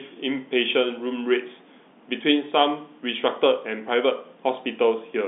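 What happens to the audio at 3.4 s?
Nothing goes wrong at 3.4 s: the speech carries on intact through that moment, still within the narrow telephone band of its G.711 coding.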